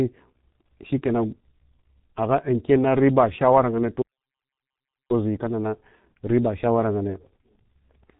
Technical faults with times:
0.00-8.20 G.723.1 codec

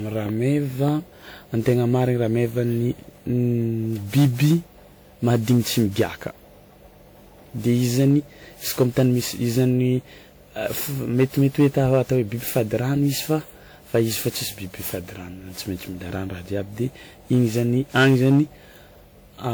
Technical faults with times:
0.00-19.54 generation loss

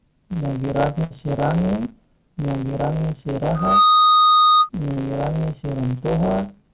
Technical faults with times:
0.00-6.73 block size mismatch (truncated)
1.04-1.12 burst of packet loss
3.55-4.69 loudspeaker feedback squeal
4.92-4.98 short concealed packet loss
5.98-6.02 short concealed packet loss

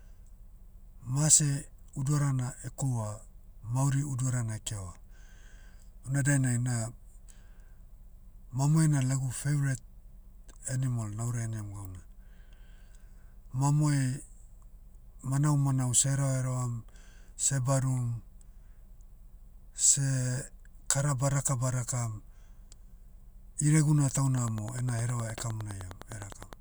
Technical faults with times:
24.33-26.61 Wi-Fi interference

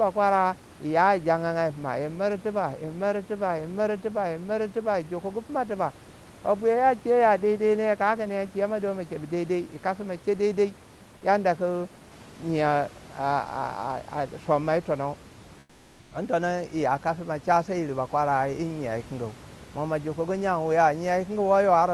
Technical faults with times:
15.59-16.11 comfort noise in place of the background

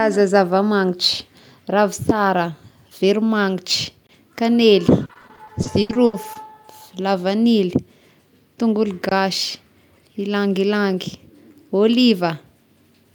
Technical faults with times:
4.07-4.09 gap between chunks
5.01-6.55 repeated packet loss (robotic sound)
9.09-9.11 gap between chunks

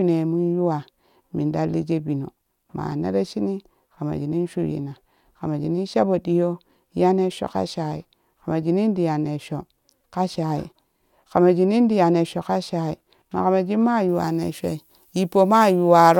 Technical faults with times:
14.09-16.20 pre-emphasis left on

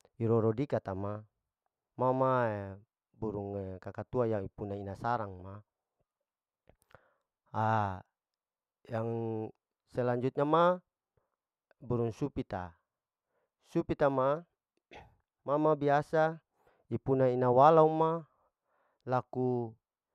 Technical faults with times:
none

